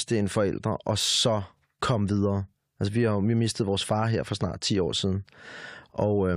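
No technical faults can be heard anywhere in the speech.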